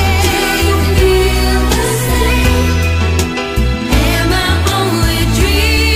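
No technical fault can be heard anywhere in the audio, which stays steady and intact throughout.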